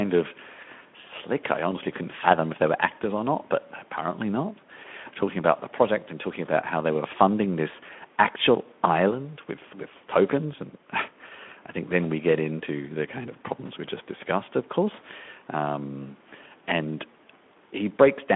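No faults: the speech carries light Speex coding texture consistent with around 15 kbps over a 200–3500 Hz line band, and the call microphone processing takes out the lowest bass, both within normal behaviour for that chain.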